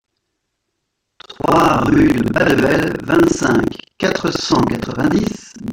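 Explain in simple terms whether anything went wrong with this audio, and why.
A steady robotic rattle runs under the speech from start to finish, buzzing about 25 times a second and dropping away in the pauses. This is buffer tearing. The program feeding the sound card and the card reading it have drifted out of step, so in every short chunk of audio, about two fifths is stale sound from a fraction of a second earlier. Those repeating hard seams make the buzz.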